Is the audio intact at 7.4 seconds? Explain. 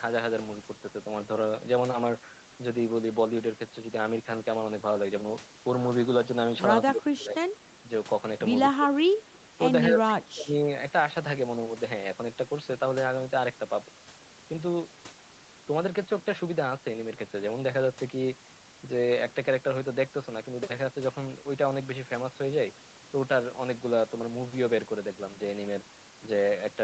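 No. At 7.4 seconds the speech falls inside a stretch of speech suppressed in double talk, running from 6.89 to 7.52 s. The level dips by as much as about 20 dB, and the voice is turned down for around half a second in total. The likely cause is an echo canceller that, with both sides talking, mistook this talker for loudspeaker echo and turned the signal down. Unlike packet-loss dropouts, the voice is pushed down rather than replaced by clean silent holes or glitches.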